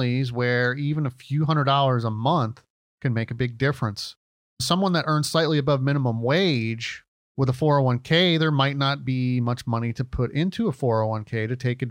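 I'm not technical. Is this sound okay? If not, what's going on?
No. Throughout the speech there is imaging from linear upsampling: it sounds like a lower-quality recording, probably 24 kHz, was converted crudely to a higher sample rate. The crispest sounds are dulled, and a faint metallic shimmer rides on hissy consonants, unlike plain muffling, which adds no shimmer.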